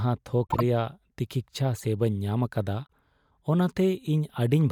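Speech carrying three corrupt frame decoded bursts, at 0.47–0.63 s, 1.76–1.85 s and 2.88–2.93 s: damaged compressed frames decoded anyway, spraying energy at wrong frequencies, visible as short vertical smears and spiky bursts, strongest first (about −15 dBFS) and faintest last (about −55 dBFS).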